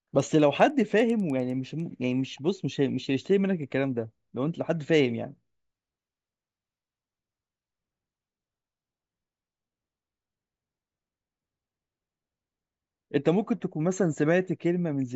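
From 0.0 to 1.8 s the speech carries a steady tick at 10 per second, the mark of a resampler restarted on every block. The 16 kHz to 48 kHz conversion treated each 100 ms block in isolation, so the filter lacked the true neighbouring samples at every block edge, leaving a small error there. Unlike buffer underrun clicks, nothing is missing and the ticks are perfectly regular, fading wherever the signal drops away.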